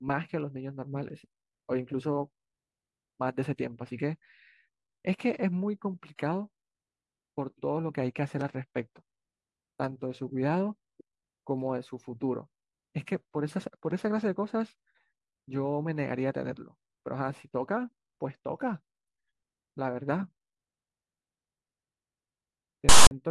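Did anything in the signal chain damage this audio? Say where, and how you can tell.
Yes, at the storage stage. File tags played as audio from 22.89 to 23.11 s: text bytes become a loud, one-sided rasp, then zero padding gives hard-edged silence.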